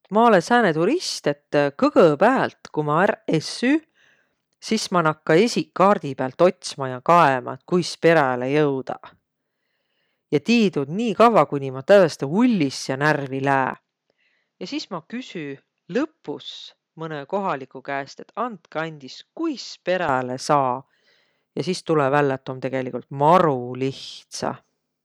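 Input switched to a poorer device, 13.74 s to 20.09 s in this speech clip: the sound abruptly dulls, cut off above 7.6 kHz, about 10 dB quieter, with a faint new noise floor and no gap. The likely cause is the recorder changing to another microphone, then back.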